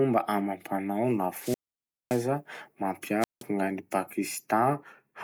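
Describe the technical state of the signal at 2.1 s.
At 2.1 s you're inside a wireless microphone squelch dropout that runs from 1.36 to 2.26 s. The FM link fades, hiss climbs, then the receiver's squelch shuts the output for about 570 ms of near silence before the speech comes back.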